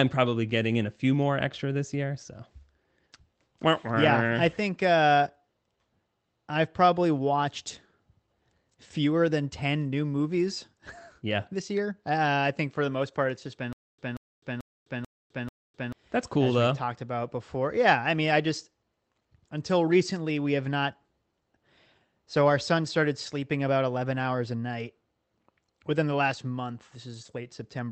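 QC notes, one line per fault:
13.73–15.92 s, stutter with silent gaps: right after "part it's just been" the sound locks into a short burst of about 182 ms that repeats five times, each followed by about 257 ms of dead digital silence, a steady 439 ms cycle. The likely cause is a stalled stream whose player replays the last buffered fragment at each retry, then runs dry. The audio meant for that stretch is lost, and the repeated bursts stay band-limited near 8 kHz by the call codec.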